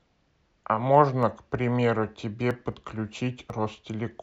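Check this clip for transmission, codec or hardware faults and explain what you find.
There are two kinds of fault in this speech clip, each showing up twice.

Dropped samples at 1.23 s and 2.72 s: a tiny fraction of a millisecond goes missing, so the waveform jumps straight to a later value. It's most likely a sample-level glitch in the stream. You hear a single sharp click, with no sound actually lost.

Audio missing between chunks at 2.51 s and 3.50 s: these sit almost exactly a second apart, which fits processing in 1-second chunks, with a few milliseconds likely lost at each handover. The join has no silence, so each one comes across as a brief skip.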